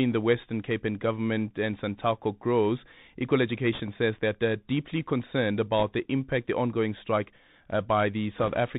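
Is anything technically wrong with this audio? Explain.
Yes. The whole speech clip runs through a Bluetooth CVSD headset codec, which fits a 64 kbps link. Its one-bit slope tracking can't keep up with loud, bright sounds, so s sounds turn scratchy over a granular hiss. A spectrogram shows a hard ceiling near 4 kHz with a speckled noise floor beneath.

There are also four bursts of bit errors on the Bluetooth voice link. The first, at 1.73–1.78 s after "and government", is light, well under 1% of bits. The second, at 3.73–3.81 s before "says that they're deeply", is the heaviest, about 2%. The third, at 5.79–5.84 s between "that they're deeply concerned" and "the impact the ongoing", is about 1%. The last and longest, at 8.38–8.58 s, is about 1.5%. Each flipped bit nudges the signal only slightly, so the result is a rushing crackle rather than sharp clicks. On the spectrogram these show as brief broadband smears below the cutoff, and the waveform shows fuzz rather than spikes.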